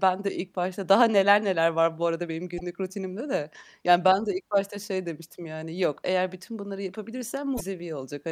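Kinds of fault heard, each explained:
Damaged data in a compressed stream: at 2.58 to 2.61 s, right after "var bu arada benim" and before "rutinimde de", and again at 7.54 to 7.61 s, a short glitch breaks into the speech. Bytes in the compressed stream were corrupted, so the decoder misreads those frames, loses sync and has to search for the next valid frame header before clean decoding resumes.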